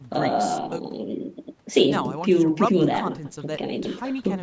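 A short stutter recurs through the speech, each time a tenth of a second of sound playing twice, at 0.25, 0.85, 1.45, 2.05, 2.65, 3.25 and 3.85 s, a steady 0.6 s apart. These are overlapping chunks: the audio was handled in pieces about 0.5 s long, and each new piece began 100 ms before the previous one ended, so every join repeats that overlap. The call microphone processing limits the audio to nothing above 8 kHz.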